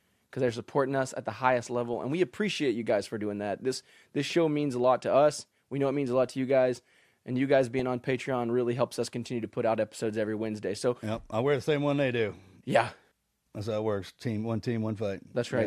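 DAB burbling breaks into the speech at 1.85–1.94 s, after "us at the highest", at 4.51–4.63 s, after "this show", and at 7.79 s, after "guys and you guys". Bit errors well under one percent slip past error correction, corrupting MP2 sub-band data into short blips of noise.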